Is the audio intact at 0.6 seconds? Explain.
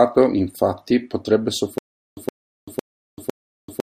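Yes, the audio is intact at 0.6 seconds, with no audible fault at that moment.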